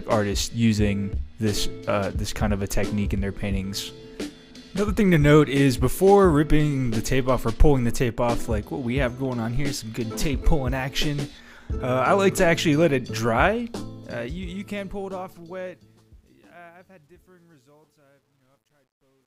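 From 13.61 s the fade-out turns gritty, worst from 16.06 s: truncation distortion on a fade, an undithered gain stage that fits 11-bit resolution.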